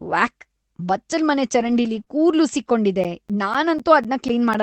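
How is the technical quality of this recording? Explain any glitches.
The recording has a few clear glitches, all after about 1.6 s, over an Opus call path that tops out around 8 kHz.

From 1.59 to 2.01 s, and again briefly at 2.54 s, you get a lost packet rebuilt from error correction. Those stretches went missing, and the decoder played the low-bitrate backup copies carried in later packets. There's no gap, but the sound turns rough and noisier there.

Right after, at 2.03 to 2.08 s, there's a short concealed packet loss. About 20 ms never arrived in time, so the receiver stretched the preceding sound over roughly 28 ms and blended back in. It comes across as a quick smear or wobble.

From 3.04 to 4.55 s there are periodic USB or driver dropouts. Something is stalling the bus or driver every 0.25 s, blanking roughly 10 ms each time, about seven in all. You hear them as evenly spaced ticks under the audio.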